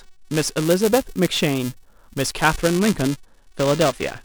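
The writer and reader of the playback ring buffer have slipped, so buffer tearing splices a small sliver of roughly 10 ms-old audio into each period, giving a steady 375 Hz robotic buzz that fits a 128-sample buffer.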